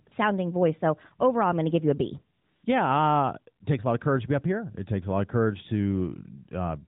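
A speech recording sent through the AMR narrowband mobile codec, which caps the audio at 4 kHz. At 0.08–0.12 s and 2.38–2.64 s the real background gives way to smooth, steady synthetic hiss. This is AMR comfort noise: speech frames stopped, and the receiver generated filler noise.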